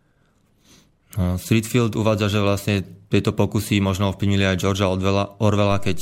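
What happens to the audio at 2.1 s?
Nothing goes wrong at 2.1 s; the speech runs through that moment intact, with no dropout, click, distortion or other audible fault.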